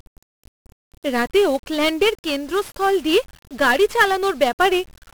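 Speech throughout carries heavy 1-bit DFPWM compression: a dense fuzzy crackle and hiss that buries the treble follow the signal continuously, unlike clipping, which distorts only the loud peaks.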